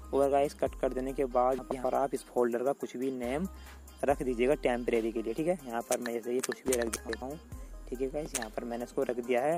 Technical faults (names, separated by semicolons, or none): frames out of order